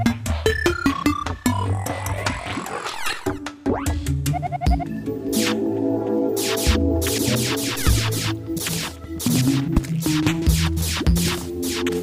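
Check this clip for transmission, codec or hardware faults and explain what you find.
No transmission, codec or hardware faults can be heard anywhere in the audio, which stays continuous and stable throughout.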